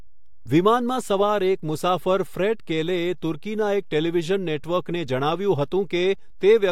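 DC offset runs through the whole of this speech clip: the waveform sits shifted off zero by a constant of about -35 dBFS. It isn't audible as a sound, but it eats into headroom and shows as a steady component at the very bottom of the spectrum.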